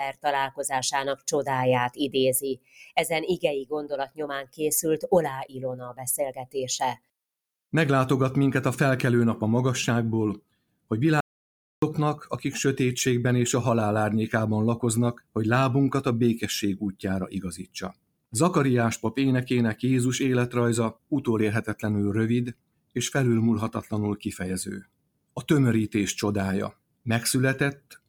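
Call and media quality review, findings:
Noise suppressor applied to non-speech sound, throughout: level swings of around 10 dB. Speech-tuned suppressor treating sustained content as noise. Onsets pass while held portions and tails sink, giving audible pumping and thinning across the whole clip.

Sound cut by the noise suppressor at 0.11–7.1 s, 10.37–10.91 s, 15.13–15.36 s, 16.92–18.34 s, 20.93–25.43 s, and 26.7 s to the end. Drops of about 20–21 dB. The suppressor gates steady and decaying sound, clipping tails short.

Audio dropout to silence at 11.21–11.82 s, roughly 0.62 s. Sound cuts mid-flow to silence, with no room tone, then resumes abruptly. Likely a lost input or link while the encoder kept writing silence. Content in the gap is unrecoverable.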